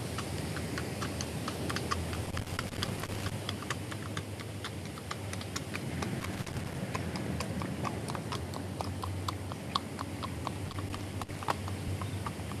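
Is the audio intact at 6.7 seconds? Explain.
No, an irregular burst of crackle and scratching runs from 6.20 to 6.75 s: loose connector crackle, a worn contact making and breaking, chopping the signal.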